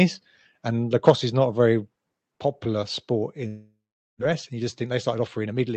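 At 1.07 to 1.1 s the loudest peak flattens with a harsh crackle, about 5 dB past the converter's limit with roughly a tenth of samples cut, likely microphone overload.

At 1.1 s the whole level, background included, drops by about 4 dB in one step, likely the call software stepping the microphone volume down after that peak.

From 3.47 to 4.23 s a long network dropout is the likely cause. The last sound is stretched into a fading buzz, then 430 ms of silence follows, and about 600 ms of audio never returns. The playout delay shifts by around a tenth of a second.

From 4.30 s to the end the jitter buffer speed-up removes short pitch-period chunks, about 100 ms in total. The audio runs 7% faster at unchanged pitch, sounding hurried, over the Opus path's 8 kHz bandwidth.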